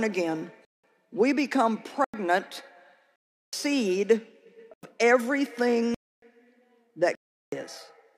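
Blocks of digital silence at 0.65–0.84, 2.04–2.14, 3.16–3.53, 4.74–4.83, 5.94–6.22 and 7.15–7.52 s cut the sound off abruptly for 93 to 372 ms, as short holes without fades. Their lengths, all multiples of about 4096 samples, point to output buffers left unfilled, not a gradual dropout.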